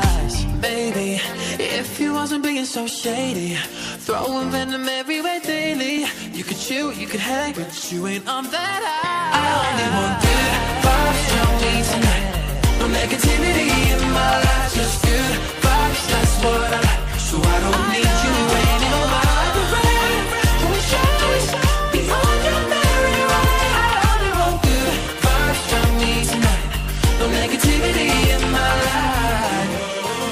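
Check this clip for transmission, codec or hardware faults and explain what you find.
Three sharp, isolated clicks are present, at 5.98 s, 11.11 s and 28.31 s. Each is likely caused by dropped samples: well under a millisecond of the stream goes missing, so the waveform steps abruptly to a later value, producing a brief click with no audible gap.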